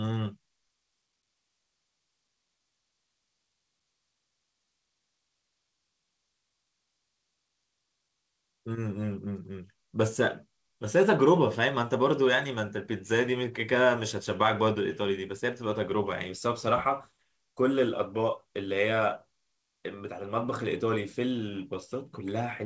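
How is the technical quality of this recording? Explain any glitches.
No glitches or faults can be heard in this speech.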